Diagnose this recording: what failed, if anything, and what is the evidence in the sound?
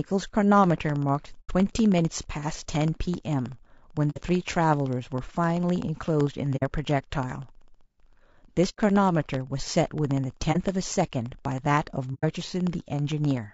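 The speech sounds rough and grainy from start to finish. A noisy haze fills the gaps between the pitch harmonics, and the top band sounds dulled and partly synthetic. The codec stage is the likely source: low-delay AAC compression of the AAC-ELD kind used in video calls. Its short frames cannot separate closely spaced harmonics well and spend bits inefficiently. The level of damage fits a bitrate around 32 kbps.

From 0.58 s to 13.44 s a steady train of tiny ticks runs under the speech, one every 64 ms, around two hundred in all. They appear only where there is signal. These are periodic USB or driver dropouts at the driver or buffer stage. Something blocks the bus or driver on a fixed schedule, and each time roughly half a millisecond of audio is replaced by silence, which produces the small regular clicks.

Six soft-edged dips and holes appear at 1.40 to 1.51 s, 4.10 to 4.21 s, 6.56 to 6.63 s, 8.69 to 8.79 s, 10.52 to 10.57 s and 12.14 to 12.24 s. 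In each, the sound fades out and back in. This is AAC frame loss with muting, which points to the network or transport stage. The decoder zeroed the spectrum of the missing frames, and the overlapping windows smoothed the edges. The gaps last 30 to 90 ms, consistent with one to three lost frames of about 30 ms each.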